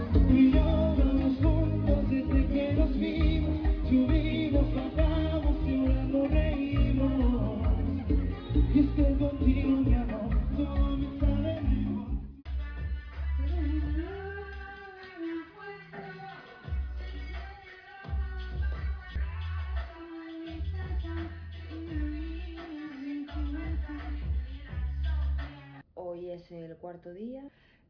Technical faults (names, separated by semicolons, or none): none